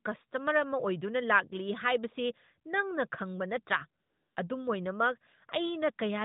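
From 4.02 to 4.36 s, the real background drops out and a smooth, steady hiss takes its place for about 340 ms before the live sound returns. This is AMR comfort noise: the sending phone judged the pause silent and stopped sending speech frames, so the receiver synthesised filler noise from a rough level and spectrum description.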